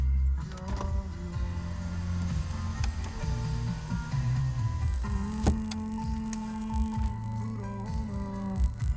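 From 4.82 s, the resampler restarted on every 20 ms block, leaving an error at each block edge, heard as a 50 Hz buzz riding the sound.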